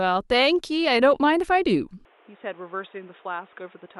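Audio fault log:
2.05 s to end: input switched to a poorer device, likely. The speech abruptly turns dull and boxy with nothing above 3.8 kHz, drops by around 5 dB, and gains a new background noise floor roughly 30 dB below the signal. There is no gap at the switch.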